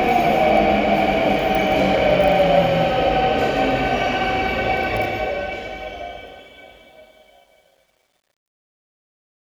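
From 4.96 s to the end at 9.49 s, the fade-out carries truncation distortion on a fade. The level stage keeps too few bits and adds no dither, which fits a path holding only 10 bits. As the sound sinks toward the smallest step, the waveform collapses into coarse square steps. Grit creeps in early. From 6.27 s onward it is worst. The tail turns rough and gritty.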